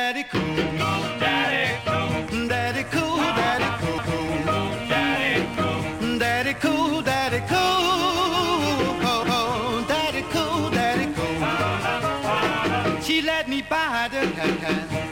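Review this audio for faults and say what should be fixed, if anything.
Mains buzz runs from 2.79 s to the end: a steady, raspy 50 Hz buzz about 20 dB below the signal. Sharp switching spikes from a dimmer, rectifier or unshielded cable enter twice per mains cycle, spreading harmonics into the kilohertz range. Use shielded, properly grounded cabling and keep dimmers off the audio circuit.

Overlapping chunks cause stutters at 3.98 to 4.23 s and 14.48 to 14.73 s, where 250 ms of sound plays twice. The audio was handled in 5 s chunks, each starting before the previous one ended. Trim each chunk's overlap before joining them, or crossfade it.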